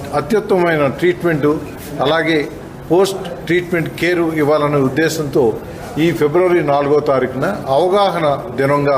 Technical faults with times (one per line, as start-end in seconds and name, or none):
4.33 dropped samples